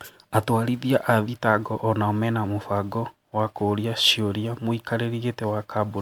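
Generation loss runs throughout the speech, likely from around ten successive MP3 encodes at 128 kbit/s. Each pass requantises on a shifted frame grid, so noise and spectral holes pile up: the sound turns swirly and hollow, consonant attacks smear, and nothing remains above about 19.9 kHz.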